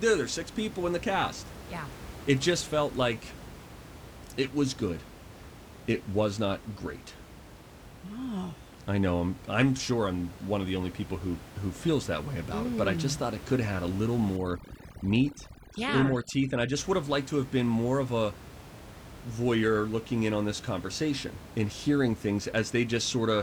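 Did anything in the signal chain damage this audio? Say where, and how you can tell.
Yes. From 14.37 to 16.77 s, just after "have had a little" and up to "would have liked to", the background drops and breaks up into twinkling specks, unlike the room noise about 17 dB below the speech elsewhere. This is overdone noise removal at the call-processing stage: a suppressor set too aggressively shuts off individual frequency bands it judges close to the noise floor, taking the quieter parts of the voice with them.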